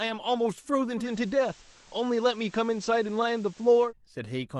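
From 0.96 to 3.93 s, digital radio blends to analogue FM over 131 ms, bringing hiss about 30 dB below the signal and a 1 dB drop in level, unlike a dropout's silence.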